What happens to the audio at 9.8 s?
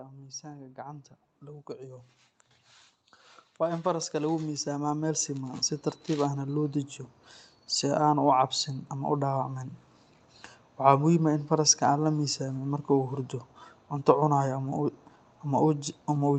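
At 9.8 s the speech runs on intact with no dropout, click or glitch, only the steady 8 kHz top-end limit and usual coding texture of the Opus call path that runs through the whole clip.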